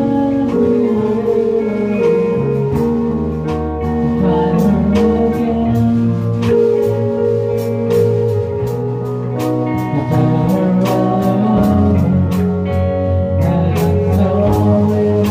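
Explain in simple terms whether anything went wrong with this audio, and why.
Nothing went wrong with this audio, because there are no dropouts, glitches or other faults to be heard anywhere in it.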